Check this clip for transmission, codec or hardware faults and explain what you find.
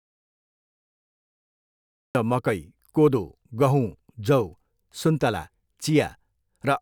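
One fault is present. From the start to 2.15 s the speech is absent, leaving dead silence with no room tone until it resumes at "र मकै कोदो". This is an audio dropout to silence, likely from a lost input or mute while the recorder kept writing silence.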